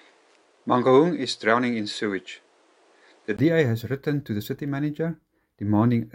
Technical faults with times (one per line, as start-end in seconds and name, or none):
0.00-3.39 input switched to a poorer device